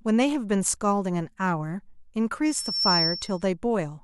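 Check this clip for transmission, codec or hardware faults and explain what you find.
Loudspeaker feedback squeal from 2.45 to 3.44 s. The microphone is hearing its own loudspeaker, and around 5.4 kHz the loop gain passes unity, so that tone feeds on itself, swelling over roughly 0.4 s into a piercing whistle that sits a few decibels above the speech.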